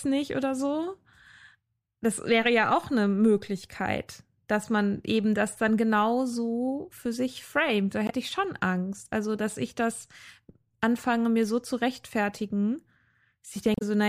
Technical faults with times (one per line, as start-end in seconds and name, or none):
8.06-8.11 damaged data in a compressed stream
13.73-13.82 damaged data in a compressed stream